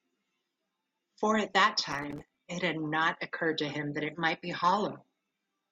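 From 1.92 s to 2.40 s the speech is torn by a burst of processor overload crackle. The processor falls behind and misses buffer deadlines over and over, each buffer lasting roughly 3 ms, with some thirty misses in that half second. Every missed buffer comes out as a short hard-edged dropout to silence. The run of tiny gaps merges into a gritty, tearing crackle over the speech, and it stops once the load eases.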